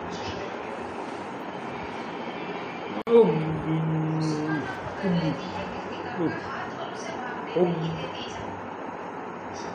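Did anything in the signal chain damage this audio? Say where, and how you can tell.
Yes. A gap at a join of encoded pieces sits at 3.02 to 3.07 s: a gap of about 52 ms cuts into continuous sound, with smeared edges, then the sound resumes where it stopped. This is a codec-stage error: separately encoded segments were joined without trimming encoder delay and final-frame padding.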